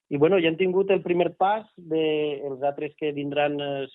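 Nothing here stands out as a technical problem; the audio simply runs its course without any glitch, dropout or odd artefact catching the ear along the way.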